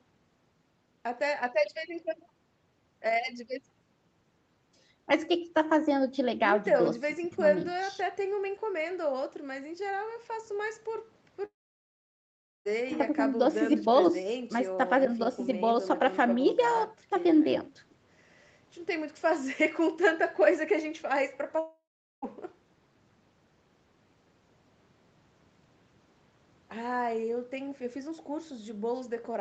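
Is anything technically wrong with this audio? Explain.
Yes. Speech cuts out twice, at 11.45 to 12.67 s and 21.59 to 22.24 s, most likely long network dropouts in which packets stopped arriving for about 1.2 s and 0.64 s. The receiver briefly extends the last sound as a fading buzz, then leaves near-silence (about 1.1 s and 0.42 s), and speech resumes with that stretch missing.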